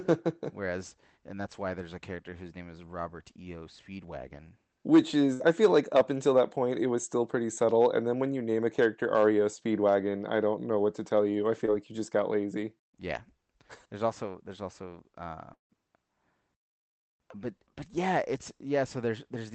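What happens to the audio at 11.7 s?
A short concealed packet loss between "to tell you I" and "like you just got", at 11.66 to 11.69 s: about 20 ms of audio missed the decoder, so the receiver extended the preceding sound and blended back, leaving a brief smear or wobble.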